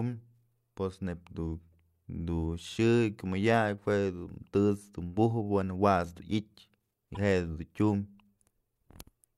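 A brief glitch interrupts the speech at 7.12 s, lasting about 50 ms until 7.17 s. This is damaged data in a compressed stream: corrupted bytes made the decoder misread frames, lose sync and resume at the next frame header.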